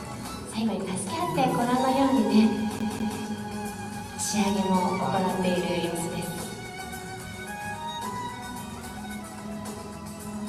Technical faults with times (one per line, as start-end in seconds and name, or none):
2.79-3.19 CD stuck on one turn